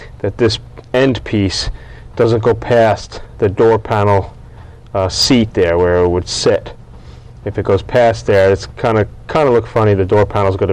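From start to finish, every loud moment carries a harsh, gritty fuzz, with crackle riding on the peaks rather than clean transients. This is hard clipping: the signal was driven about 8 dB past what a stage in the chain could pass, so its peaks were sliced flat. Only a few percent of the waveform sits at that ceiling, but those squared-off tops spray harmonics high into the spectrum, which is where the edge comes from.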